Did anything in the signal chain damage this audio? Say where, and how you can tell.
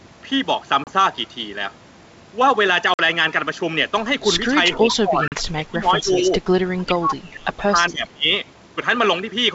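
Yes. Packet loss on an ADPCM call hits at 0.84, 2.94 and 5.28 s: hard silent gaps of 30, 50 and 40 ms, then brief, slightly distorted recovery as the decoder's predictor resynchronises.

Speech suppressed in double talk, from 4.71 to 6.41 s and 6.77 to 8.33 s, dips by up to about 25 dB, likely the call processor's echo canceller ducking both talkers.

Echo leak at 4.73 to 4.78 s and 7.88 to 8.08 s is a faint copy delayed 408 ms, about 15 to 25 dB down, likely loudspeaker pickup escaping cancellation.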